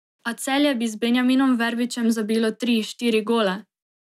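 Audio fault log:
Nothing to log here, since this speech clip doesn't have a single fault in it.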